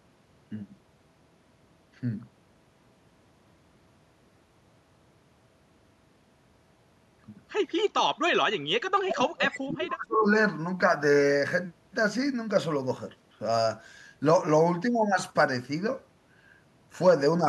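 At 8.46 to 8.61 s the speech briefly drops by about 30 dB. From 8.99 to 10.31 s it sinks again, by about 35 dB. This is likely speech suppressed in double talk. The echo canceller mistook overlapping talk for echo and turned this talker down.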